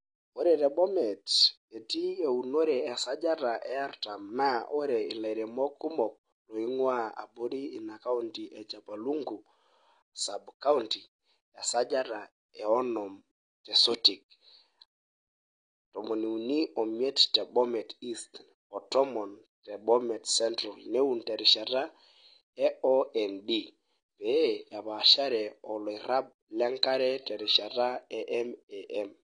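From start to finish the speech carries audible compression damage, most likely from AAC compression at a low bitrate. The sound is dull and smeared, and nothing survives above 9.8 kHz. On a spectrogram that shows as a hard, flat ceiling at 9.8 kHz across the whole clip, with empty space above it. The encoder discards that band to save bits, and a bandwidth this narrow points to a rate in the region of 32 kbps.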